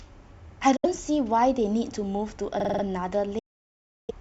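At 0.76 to 0.86 s the speech cuts to silence, then returns about 70 ms further on, as if it had kept playing. A second, longer hole runs from 3.39 to 4.11 s, losing about 0.7 s. These are likely Bluetooth dropouts: packets missed their deadline at the headphones and were discarded.

From 2.60 to 2.83 s there is a system hang loop. Instead of silence, the same 46 ms fragment repeats five times at 21.5 Hz, giving a machine-gun stutter that fits a 2048-sample ring buffer replaying while the system froze. Little or no speech is skipped afterwards.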